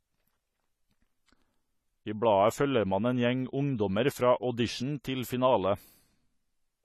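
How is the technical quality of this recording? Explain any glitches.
The technical quality is noticeably degraded throughout. The speech sounds dull and smeared, with a watery, warbling texture on sustained sounds and sibilants and nothing above 13.9 kHz. This is likely AAC compression at a low bitrate, consistent with about 32 kbps: the codec discards high frequencies and coarsely quantises the rest.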